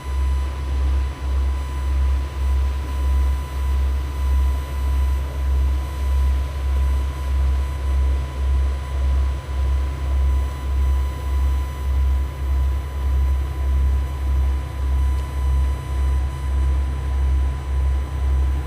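A steady, fixed-pitch whine at 1 kHz sits under this recording of sounds for its whole length, roughly 25 dB below the wanted sound. It is USB whine: the USB bus draws current in regular 1 ms frames, and that pulsing leaks into the audio path through shared power or ground, so the 1 kHz frame rate itself becomes an audible tone.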